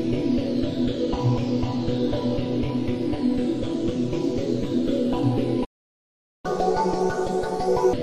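At 5.64 s the sound cuts out mid-flow and stays silent until 6.46 s, a gap of about 0.79 s. This is a playback stall. The output simply stops producing audio. The likely cause is the player running out of data or its thread being blocked. When sound returns, it resumes where it stopped, so nothing is skipped.

From 6.46 s to 7.93 s the audio runs at 1.5 times normal speed. This is catch-up at higher speed. The player resamples its backlog to win back the lost time. Because speed and pitch rise together, everything sounds hurried and shifted up by roughly seven semitones. At 7.93 s it drops back to normal speed and pitch.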